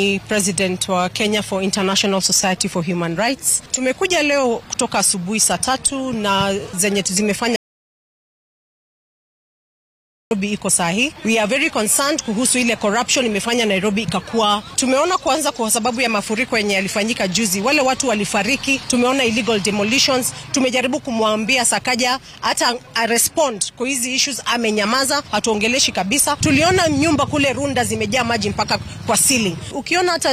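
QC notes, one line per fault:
7.56 to 10.31 s, audio dropout to silence: the sound cuts off mid-flow and comes back about 2.75 s later, with the gap being silent, not even room tone. Likely the input dropped out while recording carried on, so whatever was there is gone.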